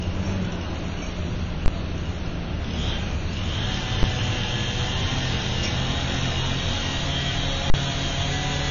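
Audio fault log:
Throughout: AAC compression. Nothing is heard above about 6.9 kHz, so the top of the spectrum is simply missing and the sound is dull. The damage is plainly audible. Quiet detail smears, and sustained parts take on a warble and fizz. This is likely low-bitrate AAC-LC, which fits a rate near 24 kbps. With so few bits, the encoder drops the highest bands and quantises the rest coarsely, leaving gaps that shift from frame to frame.
1.66–1.68 s, 4.03 s, 7.70–7.74 s: invalid numbers at full scale. Each event is a hard, very loud disturbance. The first block lasts 20 ms, the second 10 ms and the third 40 ms. A calculation produced infinite or invalid values, which were forced to the extreme sample value. The output then jumps to one extreme value, far beyond the audio's peaks, and holds there. The two short blocks come across as single bangs.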